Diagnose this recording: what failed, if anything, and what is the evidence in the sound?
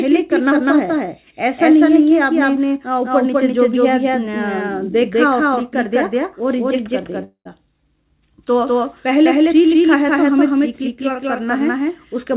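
The whole recording carries a doubled audio track. Every sound is followed by a full-band second copy about a fifth of a second later, at roughly the same level as the first, with no decay or room colour to it. On a waveform each transient appears as a matched pair of spikes. A spectrogram shows every onset ghosted by a vertical stripe of equal brightness, all within the 4 kHz ceiling of the call path. The likely stage is capture or routing, where the signal is picked up a second time through a slower path and mixed back in.

A long network dropout runs from 7.24 to 7.47 s. For about 210 ms the receiver stretches the last sound into a fading buzz. The waveform then shows roughly 100 ms of near-flat silence before the audio comes back, with about 220 ms of material simply missing. On a spectrogram this looks like smeared, repeating harmonics that dim into a dark gap and then a hard restart. 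The likely cause is lost packets that the jitter buffer had to conceal.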